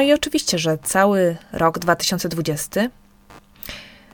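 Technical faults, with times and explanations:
Throughout, computer activity noise: there's a low buzzy, chirpy layer pulsing at around 100 times a second, sitting well down under the speech, roughly 35 dB below it. It doesn't track the talking at all; it follows whatever the computer is doing. Processor, graphics or mouse load swings pull on the ground the audio circuit shares, and that wobble gets into the signal as this scratchy buzz.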